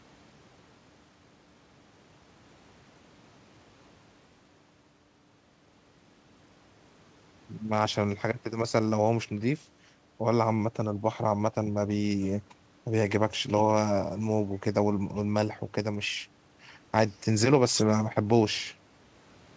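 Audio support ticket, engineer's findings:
Nothing to flag here: the speech sits on an ordinary wideband call path, with the top of the band stopping around 8 kHz, which points to a G.722-style call codec doing its normal job.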